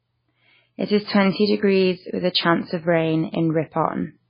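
A speech recording with heavy damage from MP3 compression running through the whole clip. Nothing is heard above 5 kHz, so the treble is sliced off at that point and the sound turns dull. The remaining detail sounds watery and swirly, because weak frequency lines drop in and out from frame to frame. This degree of damage fits a very low bitrate, around 16 kbps. The likely cause is an encoder starved of bits.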